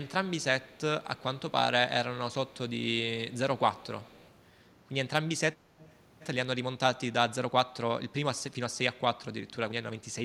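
Echo leak at 0.63, 1.16, 2.47, 3.31, 3.57 to 4.34, and 5.79 s. Faint speech repeats 192 ms late. It likely slipped past a far-end echo canceller. It grows louder by 5.79 s.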